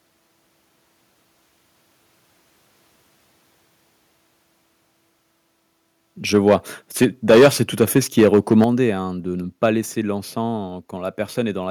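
At 6.35 to 6.55 s the speech shows microphone overload: the loudest syllables crackle harshly with flattened tops, which likely comes from the microphone input being set too high so the peaks run into the converter's ceiling. Here the signal sits about 6 dB over the limit, with roughly one sample in twenty clipped. A heavier burst follows from 7.02 to 7.48 s, about 10 dB over, with around a tenth of samples clipped.

At 7.04 s, inside that burst, the microphone volume is stepped down by about 2 dB. Voice and background fall together in a single step, which points to the call software reacting to the clipping by lowering the device input level.

Overload returns from 7.8 to 8.64 s, right after "c'est tout", about 6 dB over. At 8.64 s, just before "hein de ne", the level drops abruptly by about 6 dB.

A short clipped peak at 9.63 to 9.66 s, after "hein de ne", is about 2 dB over. It is followed at 9.66 s by a further step down of about 1 dB.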